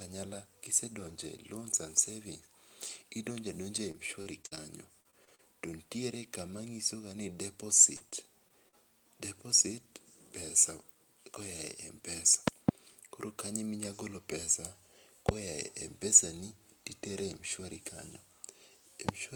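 Speech with two kinds of fault. Repeated packet loss (robotic sound) affects 3.91–4.58 s, 5.00–5.40 s and 7.96–8.75 s. Several short holes, the longest about 58 ms, are patched by repeating the preceding sound, giving a choppy quality with pieces missing; a spectrogram shows smeared, repeated frames and abrupt breaks. A loud pop occurs as a pair at 12.48–12.71 s, just before "koro kanyo", then singly at 15.29 s and 19.09 s, roughly 20–25 dB above the speech. These appear as thin vertical spikes on the waveform and full-band lines on the spectrogram, likely from an electrical transient such as a switch or static discharge.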